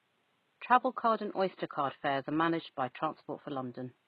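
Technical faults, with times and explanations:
Throughout, HE-AAC compression: s sounds are plainly gritty and metallic rather than dulled by a cutoff, likely from treble rebuilt from copied lower bands, fitting about 16 kbps.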